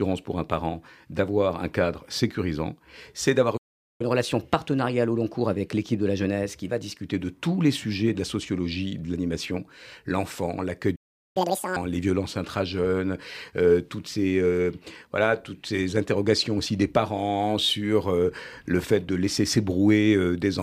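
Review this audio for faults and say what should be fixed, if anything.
The speech halts twice with a playback stall. Silence runs from 3.57 to 4.01 s, about 0.43 s, and again from 10.95 to 11.37 s, about 0.4 s. The player likely ran dry of buffered data, or its thread was blocked. Output simply stopped until it recovered. A deeper playback buffer and a playback thread that nothing else can block would prevent this.

Each stall is followed by catch-up at higher speed. From 4.01 to 7.01 s the speech plays at 1.1 times normal speed. Pitch rises by about a semitone and a half. From 11.37 to 11.76 s it runs at double speed and jumps around ten semitones. The player is resampling its backlog to regain lost time. Limiting catch-up to a small, gradual speed change, or using time-stretching that keeps pitch, would prevent this.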